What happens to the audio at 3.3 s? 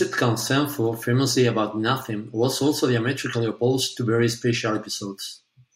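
Nothing goes wrong at 3.3 s; the speech continues intact through that moment.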